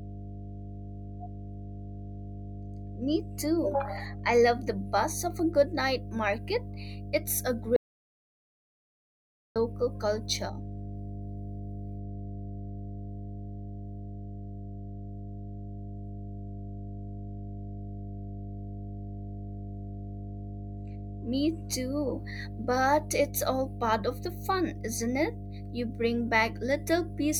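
A steady mains hum at 50 Hz runs under the whole clip. It is strong, roughly 10 dB below the speech, from power-line coupling into the signal.

At 7.76 s the speech cuts to an audio dropout to silence until 9.56 s. That is 1.8 s of silence with no room tone, likely from a lost input.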